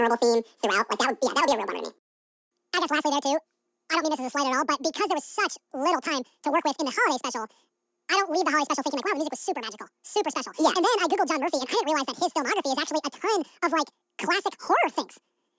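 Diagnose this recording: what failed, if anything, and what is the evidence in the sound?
The fault is a wrong sample rate at the playback stage, and it runs through the whole clip. The speech is twice as fast as natural and pitched a full octave high, 12 semitones up. Speed and pitch have shifted together by the same factor. That points to samples captured at 8 kHz being clocked out at 16 kHz with no rate conversion. Each second of the recording plays back in half a second.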